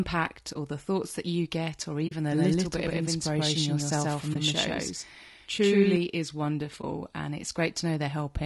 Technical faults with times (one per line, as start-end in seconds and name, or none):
0.00-8.45 low-delay AAC compression
0.53-0.56 AAC frame loss with muting
2.07-2.13 AAC frame loss with muting
2.32-5.96 doubled audio track
4.33-4.36 AAC frame loss with muting
6.81-6.84 AAC frame loss with muting